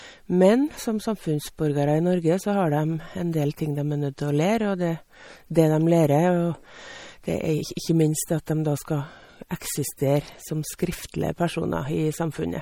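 Speech throughout, with plainly audible MP3 compression damage. Nothing remains above 19.6 kHz. Weak detail swirls and chirps, likely from a low bitrate near 48 kbps.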